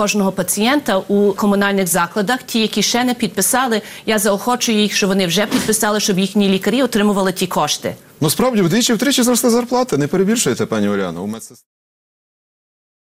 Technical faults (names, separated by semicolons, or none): none